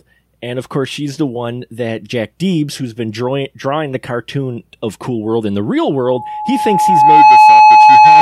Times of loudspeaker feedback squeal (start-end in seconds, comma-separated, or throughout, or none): 6.03-8.21